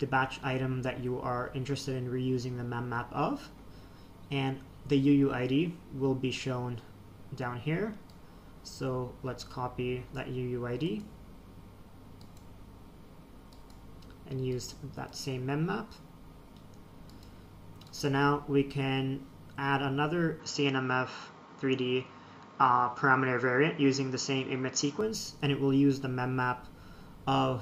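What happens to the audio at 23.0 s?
At 23.0 s the sound sits inside a stretch from 20.40 to 25.01 s where it turns duller, losing everything above 7.6 kHz, shifts a few dB in level and gains a faint new noise floor. That combination points to a likely input switched to a poorer device, not a plain filter, with no gap at either switch.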